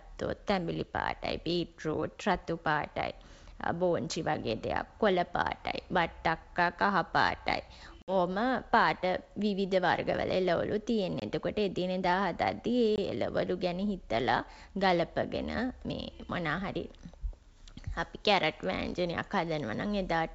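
Packet loss on an ADPCM call breaks the speech at 8.02–8.16 s, 11.20–11.23 s and 12.96–12.98 s, leaving hard-edged silent gaps, the first a few packets long and the others single packets. Afterward, the decoder's predictor and step size briefly mismatch, so speech resumes slightly distorted.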